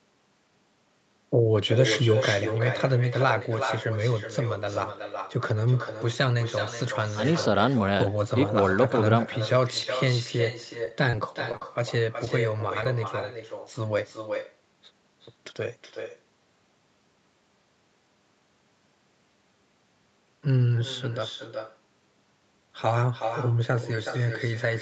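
A quieter, thinner copy trails every phrase of this speech by around 400 ms, sitting about 8 dB below the direct sound for the whole clip. That is echo with no canceller. The far end is playing the call through a loudspeaker, its microphone is picking that playback up, and nothing subtracts it before it travels back, so the round-trip delay turns into a fixed, audible lag. Between 10.85 and 12.86 s a cluster of brief ticks, smears and small hiccups breaks up the otherwise steady flow. These are scattered short gaps, about ten of them, each only a few tens of milliseconds. They add up to roughly 140 ms of missing audio, of which 120 ms was patched by stretching the preceding sound. The band stops near 8 kHz, which is how the call path normally sounds.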